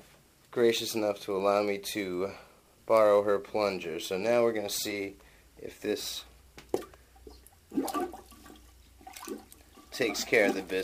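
No technical faults are audible.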